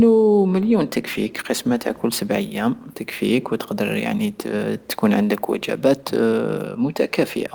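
The speech signal holds steady throughout with no technical faults, the only background being the room's own ambient noise sitting about 38 dB below the voice.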